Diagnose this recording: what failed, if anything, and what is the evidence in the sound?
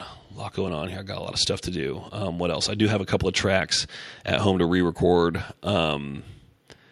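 Nothing in the chain appears to have failed: the speech signal reaches playback continuous and intact, with no audible evidence of trouble at any stage from capture onward.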